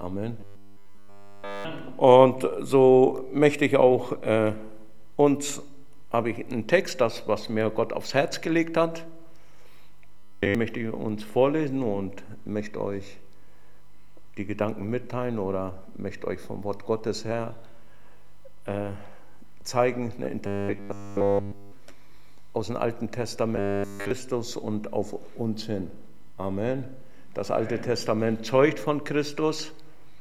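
Robotic sound from repeated short buffers at 0.41 to 1.65 s, 10.18 to 10.55 s, 20.47 to 21.72 s and 23.56 to 24.11 s: a rigid, metallic 100 Hz buzz almost entirely replaces the sound. This is likely a 10 ms slice looped while fresh audio failed to arrive.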